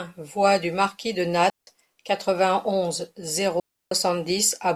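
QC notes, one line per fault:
1.50–1.67 s and 3.60–3.92 s, digital wireless dropout: the digital radio link lost too much data for the receiver to conceal, so it muted the output behind a very short fade instead of passing damaged audio. The speech drops into clean near silence for about 170 ms, then about 320 ms, with no crackle or noise burst on either side, and resumes abruptly once the link recovers.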